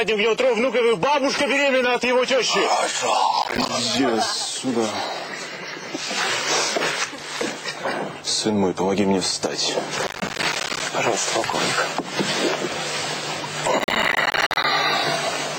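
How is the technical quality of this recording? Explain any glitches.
The recording has three bursts of processor overload crackle, at 3.42–3.69 s, 10.07–10.8 s and 13.79–14.64 s. Missed buffer deadlines, each around 10 ms, drop in short silent gaps that sound gritty. On the waveform these appear as many hard-edged dropouts, and on the spectrogram as vertical broadband streaks. The later bursts are longer and denser.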